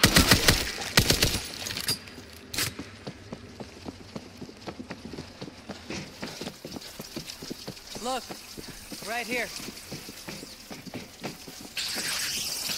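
No technical faults can be heard anywhere in the audio. There is nothing in it to place on a timeline or trace to a cause.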